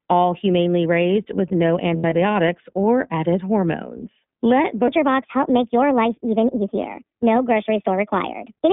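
The whole clip runs through the iLBC codec, squeezed into a 150 Hz to 3.6 kHz line band. It's plainly rough and synthetic, which fits the 20 ms, 15.2 kbps mode.

From 1.96 to 2.13 s, right after "humanely raised with no", lost iLBC frames fill in as a buzzy held vowel. That fits about 100 ms lost over 160 ms, longest run roughly 70 ms.

From 4.88 s to the end, the section is at the wrong speed, 1.3 times fast and roughly five semitones sharp, most likely from a wrong clock rate.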